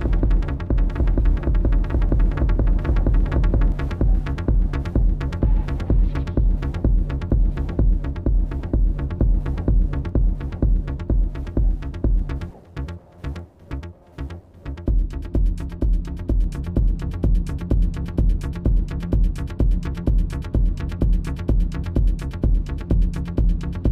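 From the very start until 3.72 s, the sound has a doubled audio track: a second full-band copy trails about a second and a half behind, a few decibels quieter than the original. This is likely a second capture through a slower path, or an edit holding two copies out of step. Unlike an echo or reverb, the copy repeats only once, with no decay and no room colour, and it cuts off abruptly at 3.72 s.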